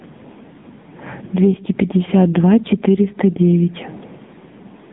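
From the very start to 2.36 s, the speech carries a rough, metallic edge that clings to every sound and drops away in the pauses. That is periodic clock jitter: interference is wobbling the converter's sampling clock at a steady rate of around 100 Hz, so each frequency in the speech picks up sidebands about 100 Hz above and below it. The effect is strongest on the brighter, higher components.

Across the whole clip, the level moves by something like 15 dB. The loud and quiet parts are pressed close together, so the sound feels squashed and restless. This is gain pumping, likely caused by input gain set far too high and a fast limiter or compressor clamping down on each loud moment before releasing again in the gaps.

Throughout, the sound is boxed into a thin telephone band between 150 Hz and 3.7 kHz, with nothing above 3.7 kHz. The voice comes across buzzy and synthetic. This is heavy damage from the AMR narrowband mobile codec (AMR-NB), which rebuilds speech from a simple vocal-tract model fed by a handful of pulses per frame. 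The coarseness points to a low rate, around 6.7 kbps.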